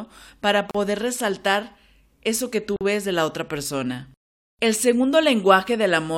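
Speech with two gaps at a join of encoded pieces, at 0.71 to 0.75 s (36 ms) and 2.76 to 2.81 s (about 47 ms). Separately encoded segments were butted together untrimmed, leaving encoder delay and end padding. Each shows as a blank vertical stripe with smeared edges.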